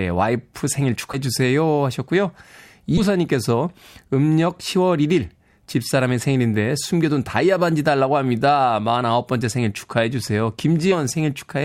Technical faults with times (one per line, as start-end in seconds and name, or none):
1.13-1.16 compressed frames skipped
2.97-3.01 compressed frames skipped
10.91-10.95 compressed frames skipped